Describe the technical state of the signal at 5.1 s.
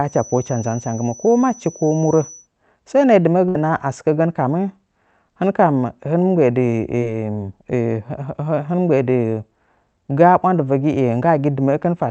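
At 5.1 s the speech is intact, with no dropout, click or distortion, only the ordinary coding character of the Opus call path, band-limited at 8 kHz.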